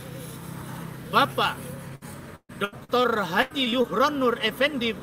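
Repeated packet loss (robotic sound) runs from 1.95 to 3.06 s and again from 3.42 to 3.86 s. Audio kept going missing in short gaps, the longest 133 ms, each patched by stretching the previous sound, leaving choppy sound with pieces missing.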